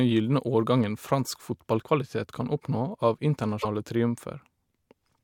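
Broken MP3 bit reservoir at 3.61 to 3.65 s in this speech clip: the speech skips forward and the 40 ms after the jump comes out garbled. The likely cause is missing MP3 frames, with the gap fitting 24 ms frames. Each frame can store part of its data in the spare space of earlier frames. After the cut, the next frame reaches back for that data and decodes bytes from the wrong frame.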